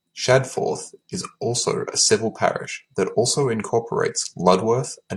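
No technical faults can be heard anywhere in this recording.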